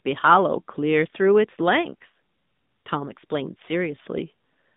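AMR narrowband mobile codec damage runs throughout. The 8 kHz mobile coding leaves a 150 Hz to 3.7 kHz band, nothing above 3.8 kHz, and a buzzy synthetic quality consistent with about 10.2 kbps.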